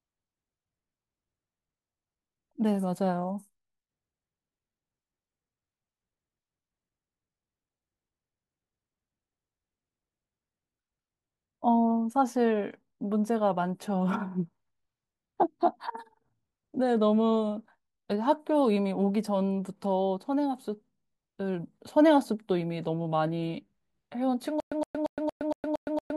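From 24.60 s to the end, playback likely stalled and kept retrying, replaying its last fragment before running dry. This gives stutter with silent gaps: a 117 ms burst of speech repeats seven times every 231 ms, separated by 114 ms of digital silence.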